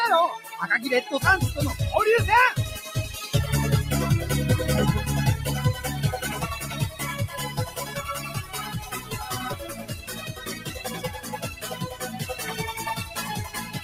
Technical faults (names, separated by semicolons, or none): noise suppressor applied to music or sounds; sound cut by the noise suppressor